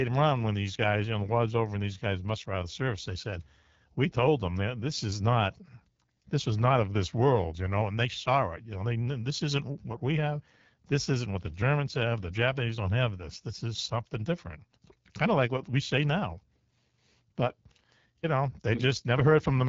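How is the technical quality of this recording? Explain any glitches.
The whole clip has passed through the AMR wideband (HD Voice) codec, and the damage is plainly audible from start to finish. The speech has a rough, raspy edge, which points to one of the codec's two lowest rates, around 8.85 kbit/s. At that rate the vocal tract model and its pulse excitation get too few bits to follow the voice cleanly. Everything above about 7.5 kHz is gone, leaving a band-limited, phone-call quality.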